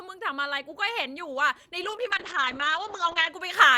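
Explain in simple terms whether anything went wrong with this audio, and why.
A call bitrate drop runs from 1.85 to 3.35 s: the call squeezed the speech into far fewer bits, so it sounds rough and muffled.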